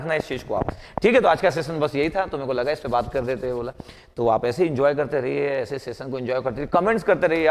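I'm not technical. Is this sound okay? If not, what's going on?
Yes, nothing wrong is audible in this recording.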